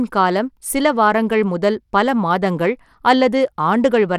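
Throughout the speech, the treble flickers and thins while a gritty, grainy noise rides on the sound. This is likely Bluetooth SBC compression at a low bit pool, which fits roughly 96 kbps. A spectrogram shows nothing above 17.2 kHz and patchy, blocky upper bands.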